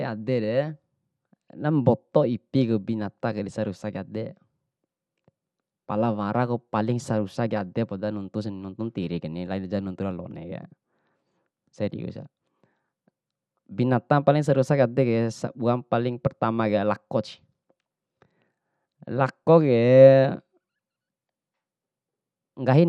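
A speech clip with dull, gurgling, granular distortion the whole way through, likely MP2 compression at a low bitrate, around 80 kbps, with upper bands dropping out.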